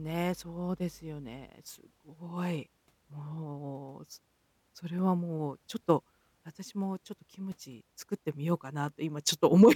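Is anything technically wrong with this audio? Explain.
Yes. Mains hum runs from 0.0 to 1.5 s at the start of this speech clip. A ground loop or a nearby transformer has let the 50 Hz power line leak into the signal path, adding electrical current that was never part of the acoustic sound. It is heard as a steady low drone with some low harmonics, sitting about 30 dB below the speech. It stops at 1.5 s.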